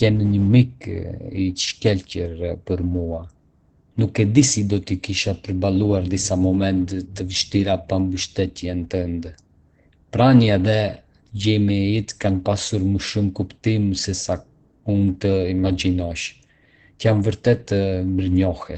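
Speech throughout, heavily marked by Opus compression: it sounds muffled and hoarse, with nothing above about 8.9 kHz, which points to the codec's speech mode at a very low rate, likely around 12 kbps. Unlike MP3 damage, there is little swirling or watery warble.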